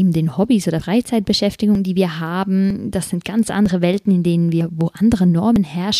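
Short skips at 0.8, 1.75, 2.7 (after "die wir"), 3.66 (after "das sind ganz"), 4.61 (after "in denen") and 5.56 s, each dropping about 50 ms every 0.95 s, are likely audio missing between chunks. Unlike dropouts, the ends butt together with no silence.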